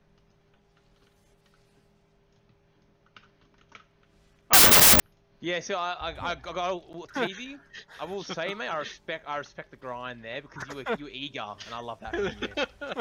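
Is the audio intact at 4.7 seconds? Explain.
No. From 4.53 to 5.0 s the sound collapses into loud, harsh noise, with the original buried inside it, running 1.5 times too fast and pitched up to match. This is a wrong sample width fault: 16-bit integer data is being read as packed 24-bit integers, so each value is assembled from bytes belonging to different samples. Only some of them keep the real signal's top bits, and three bytes are consumed per sample instead of two.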